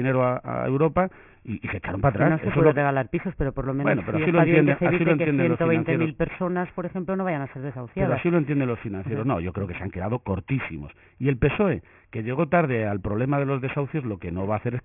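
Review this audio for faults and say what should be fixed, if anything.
Aliasing runs throughout. Content above 3 kHz folds back as gritty, unrelated tones, fairly strong, which fits an unfiltered drop to a 6 kHz rate. Prevent it by low-pass filtering below half the new rate before reducing the sample rate.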